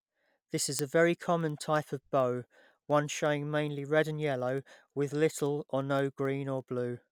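From 0.17 to 7.04 s, word clock ticks recur about every tenth of a second. An unlocked receiver slips one sample per clock crossing, leaving thin vertical broadband lines on a spectrogram.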